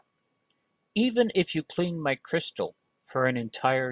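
Speech recording, and nothing technically wrong with it.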